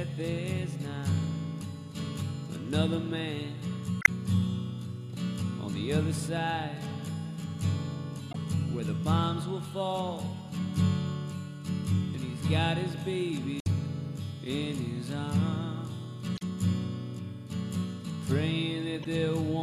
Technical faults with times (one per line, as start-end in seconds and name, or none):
3.99-4.09 damaged data in a compressed stream
8.30-8.35 damaged data in a compressed stream
13.59-13.67 damaged data in a compressed stream
16.35-16.42 damaged data in a compressed stream
19.02-19.06 damaged data in a compressed stream